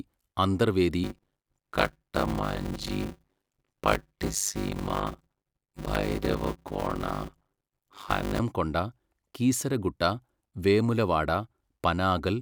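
Speech, with a block size mismatch (padded) from 1.04 to 8.40 s: one stage writes shorter blocks than the next reads, consistent with 256-sample writes, and zeros pad each block. The result is a 100 Hz buzz, with the speech slowed to about 0.53 times normal speed at roughly normal pitch.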